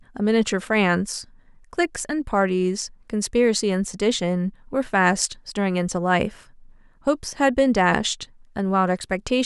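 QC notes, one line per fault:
No technical faults can be heard anywhere in the speech; the signal's level, timing and frequency content hold steady with nothing added or missing.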